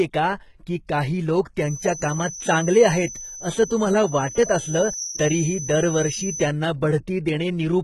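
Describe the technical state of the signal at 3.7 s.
A thin, steady whistle near 5.8 kHz sits about 10 dB below the speech, swelling and fading slowly in level. It runs from 1.57 s, just after "का की काही लोक", to 6.54 s. This is a feedback whistle, most likely a loudspeaker-to-microphone loop held right at the edge of feedback, so one tone rings on without building up.

Beneath it, s sounds come out gritty and lispy, the treble is rebuilt rather than real, and nothing reaches above 11.8 kHz. This is likely heavy HE-AAC compression, consistent with HE-AAC v2 at a low bitrate around 16 kbps. The upper band is copied up from lower frequencies, so its harmonics don't line up.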